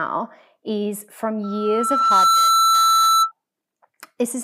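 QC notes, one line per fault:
1.43–3.32 s, loudspeaker feedback squeal: just after "is from", the microphone picks up its own loudspeaker and the loop gain passes one at 1.3 kHz. That tone swells over roughly a second into a steady squeal, ending up around 10 dB above the speech.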